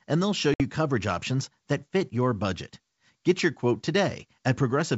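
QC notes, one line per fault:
0.54–0.62 s, packet loss on an ADPCM call: a 60 ms hard-edged silence, then distorted speech until the decoder's predictor and step size catch up.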